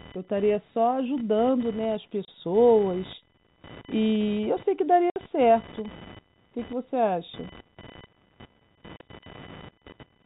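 A computer activity noise runs under the speech from start to finish: a buzz pulsing at roughly 1 kHz, about 20 dB below the speech. It comes from load swings in the computer's processor, graphics hardware or peripherals pulling on the ground shared with the audio circuit. Because it tracks the machine's activity rather than the talker, it persists through pauses and does not follow the level of the speech.

Packet loss filled with silence cuts the speech three times: at 2.25 s for 30 ms, at 5.10 s for 60 ms, and at 8.97 s for 30 ms. In each case audio that never arrived was replaced with silence, leaving abrupt holes with hard edges where the sound drops out and resumes. The 30 ms gaps point to single lost packets of 30 ms, and the 60 ms gap fits two consecutive losses. The speech itself is carried in G.711 telephone coding, heard as narrowband sound with nothing above 4 kHz.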